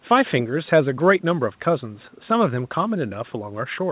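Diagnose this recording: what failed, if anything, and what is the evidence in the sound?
Nothing has failed: the speech has the narrow telephone band of a call path, with nothing above 4 kHz, which fits a G.711 A-law codec at 64 kbps, and the normal low-bass roll-off of the call microphone processing.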